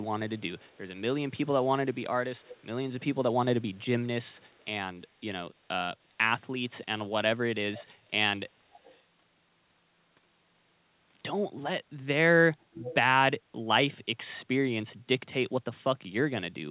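A far-end echo canceller likely let part of its loudspeaker pickup through, so this speech carries an echo leak: a copy trailing by about 0.3 s at 0.0–0.8, 2.36–2.66, 3.61–3.85, 4.25–4.66, 8.71–9.02 and 12.74–12.95 s. It is as faint as about 40 dB below the speech at some points and strongest, about 10 dB below the speech, at 12.74 s. All of it is heard through a narrowband call path with nothing above 4 kHz, which fits G.711 at 64 kbps.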